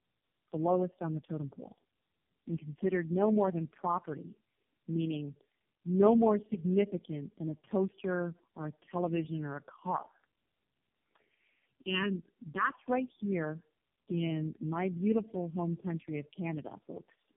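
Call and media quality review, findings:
Tandem speech coding, whole clip. Speech rough, muffled, warbly, nothing above 3.5 kHz. Sounds like several low-rate coders in series, fitting about four passes with AMR-NB hops. Each codec re-encodes the previous one's degraded output, so artefacts compound.

Channel delay (comb filtering), 11.65 to 12.72 s, just before "right here in my". Hollow, phasey tone. One channel lags by under a millisecond, and the mono sum cancels shared content at evenly spaced notches from around 700 Hz up.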